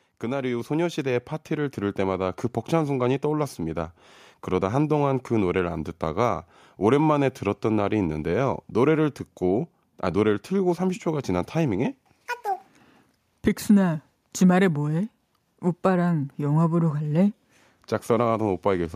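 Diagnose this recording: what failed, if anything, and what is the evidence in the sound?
The fault is automatic gain rising in the call processing stage. From 0.2 s to 12.38 s the speech and the background noise grow louder together, climbing steadily by about 9 dB over roughly twelve seconds rather than jumping. Because the noise floor rises with the speech, the talker isn't moving closer. The gain control judged the input too quiet and kept raising its gain across the whole stretch.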